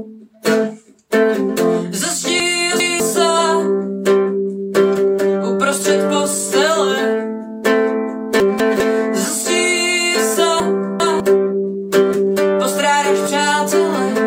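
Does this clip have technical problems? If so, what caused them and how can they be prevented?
Yes: chunks out of order at 2.4–3.0 s, 8.4–8.8 s and 10.6–11.2 s, where a 200 ms chunk plays one or two slots late, jumbling the sound. Reorder by sequence number before playback.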